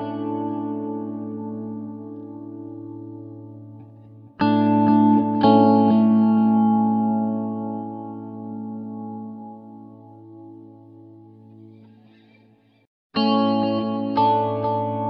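No technical faults can be heard anywhere in the audio. There are no dropouts, breaks or sudden changes at any point.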